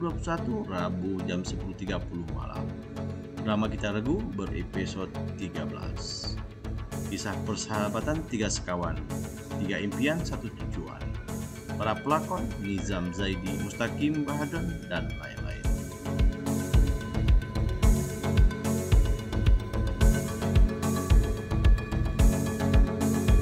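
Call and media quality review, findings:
No audible faults found in this recording.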